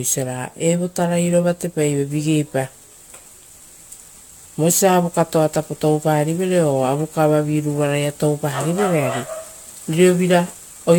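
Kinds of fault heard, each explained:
Generation loss: swirly, hollow speech with blurred onsets, likely from about four AAC re-encodes; the spectrogram shows smeared content with nothing above 17 kHz.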